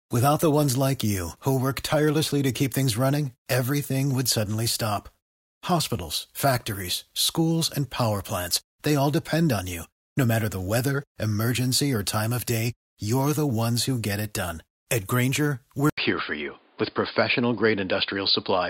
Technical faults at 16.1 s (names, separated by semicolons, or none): input switched to a poorer device